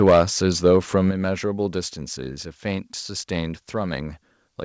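Microphone overload runs from the start to 0.22 s. The first loudest syllables have a harsh, crackling edge with flattened peaks, most likely because the input was driven about 5 dB past the converter's ceiling. Around 7 percent of the samples in that stretch are cut off at the limit, so the distortion is gritty before the level settles.

Microphone volume stepped down twice, at 0.10 s and at 1.11 s. Both voice and background drop abruptly, by about 3 dB at the first step and by about 7 dB at the second. The first step falls inside the distorted opening. This points to the call software having likely reacted to the clipping by cutting the device's input volume in discrete steps rather than smoothly. Above 8 kHz there is nothing, which matches the band limit of the G.722 call path the audio passed through.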